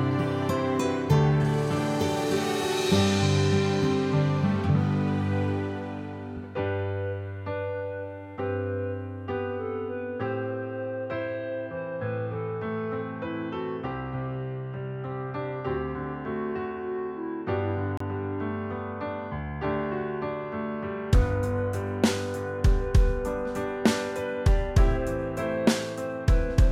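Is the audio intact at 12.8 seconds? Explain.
Yes, the audio is intact at 12.8 seconds, with no dropout, glitch or other fault at that moment.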